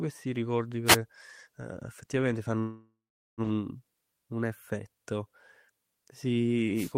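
At 0.85 s a wireless microphone noise hit cuts in for about 0.12 s, and another follows at 6.75 s for about 0.19 s. Both are brief swishes of static over the speech. The FM radio signal faded as reflections cancelled, and receiver noise rose over the speech.

From 2.59 to 3.41 s there is a call audio freeze. The last sound trails on as a fading buzz, then about 0.41 s of silence. Delayed packets likely starved the jitter buffer. Speech resumes where it stopped, about 0.78 s late, with nothing lost.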